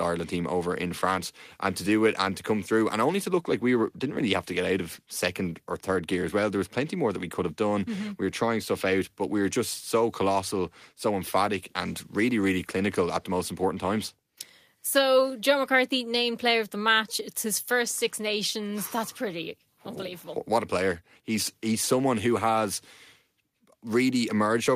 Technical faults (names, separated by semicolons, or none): none